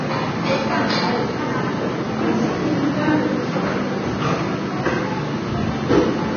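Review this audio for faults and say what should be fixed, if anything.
Throughout the clip, nothing is present above 6.5 kHz. The remaining treble sounds hissy and grainy, with roughened tones and smeared attacks. This is likely heavy Vorbis compression. A very low bitrate, around 20 kbps, forced a low cut-off and coarse treble quantisation that turned fine detail into noise. Encode from the original source at a much higher Vorbis quality setting.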